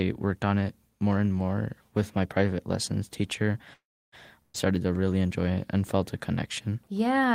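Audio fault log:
3.73–4.15 s, call audio freeze: after "my private lessons teacher" the sound trails off into about 0.3 s of silence, then resumes with nothing lost, likely because delayed packets emptied the jitter buffer.
4.42–4.57 s, burst of packet loss: the last sound is briefly held and fades, then the sound jumps ahead into "to really enjoy it". About 120 ms is gone because lost packets were covered by stretching the last sound.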